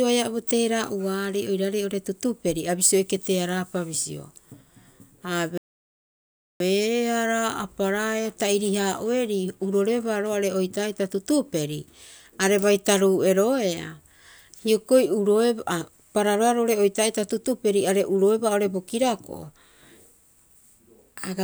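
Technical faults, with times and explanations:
5.58 to 6.60 s, playback stall: the speech just drops out mid-flow for about a second, then carries on. Dead silence rather than a glitch, so it's likely the player starved of data or its thread got blocked until it caught up.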